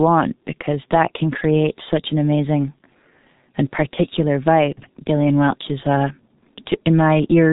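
G.723.1 codec damage runs through the whole of this speech recording, and it is heavy. Nothing survives above about 3.8 kHz, so the voice sounds muffled. The codec rebuilds speech from a coarse model updated only once per 30 ms frame, so transitions smear, consonants blur and a hoarse, buzzy roughness sits on every syllable. The degree of damage points to a very low bitrate, consistent with the codec's 6.3 kbit/s mode.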